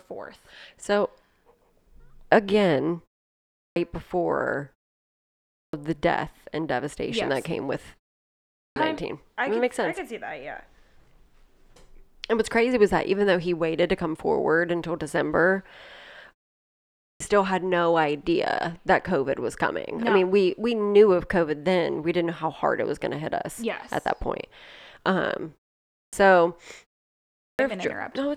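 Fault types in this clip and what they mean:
clipped start after a pause: Six times, speech bursts in abruptly with its opening missing, losing about 0.26 to 0.30 s, as before "the death and devastation" at 5.44 s. The output device sleeps during brief pauses and needs that long to wake.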